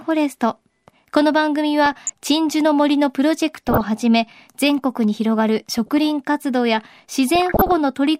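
Weak DAB reception lets bit errors slip past error correction into the MP2 stream, corrupting scale factors and samples so single sub-bands leap in level. This is DAB burbling: watery, bubbling blips over the speech at 1.86–2.10 s, 3.56–3.81 s, 5.61–5.92 s and 7.35–7.72 s.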